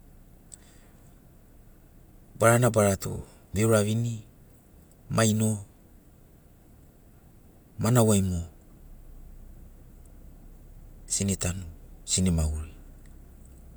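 Nothing stood out on listening to this speech recording.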